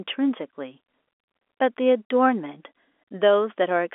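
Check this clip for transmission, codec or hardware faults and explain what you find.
No faults found.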